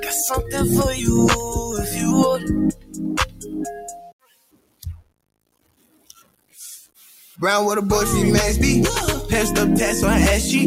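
Grainy, gritty distortion runs through the whole audio and shifts with the sound, sitting around 30 dB below the signal. The likely cause is low bit depth without dither, with the signal truncated to a few bits, which fits roughly 7-bit resolution, so the rounding error tracks the material instead of forming a steady hiss. On top of that, the level pumps and thins throughout, swinging by roughly 15 dB, because a noise suppressor was applied to music or sounds and is treating sustained parts and tails as noise. Distinct sound cuts by the noise suppressor appear at 1.4 to 1.73 s (about 4 dB), 2.72 to 4.85 s and 5.01 to 6.56 s (about 18 dB each), and 6.86 to 7.38 s (about 15 dB). In these passages the held or decaying material sinks while sharper onsets mostly survive.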